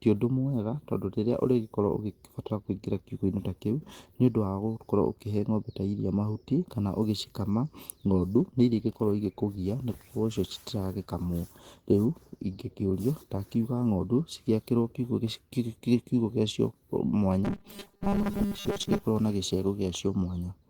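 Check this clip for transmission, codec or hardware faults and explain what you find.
Two faults stand out in this speech clip: a call bitrate drop and a robotic buzz from repeated short buffers.

The call bitrate drop runs from 8.23 s to 14.93 s. The bitrate falls from 32 kbps to 18 kbps and stays at its lowest for about 5.9 s. The call's bandwidth estimate fell, so the encoder was told to spend far fewer bits. Opus then codes the speech more coarsely. The voice turns rough and less clean until the rate climbs back.

The robotic sound from repeated short buffers appears between 17.45 s and 19.03 s. The voice becomes a rigid, metallic buzz near 200 Hz that still loosely follows the speech. The likely cause is audio arriving too seldom, so the software fills the gaps by replaying the last few milliseconds. A 200 Hz buzz fits a repeated slice of about 5 ms. Most of the stretch is repeats, with the real audio skipped.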